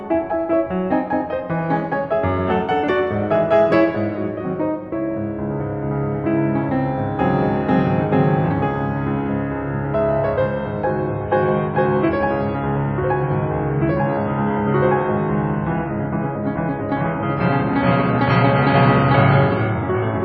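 At 10.88 s the music abruptly switches to an adaptive stream at a lower bitrate and stays there until the clip ends at 20.25 s. The connection evidently slowed, so the player swapped to a cheaper rendition. The sound fits a drop from about 128 kbit/s MP3 to about 24 kbit/s. Everything above 5.6 kHz vanishes, leaving the music dull and smeared with codec artefacts. Unlike a rebuffering stall, the switch happens instantly, with no silence or gap.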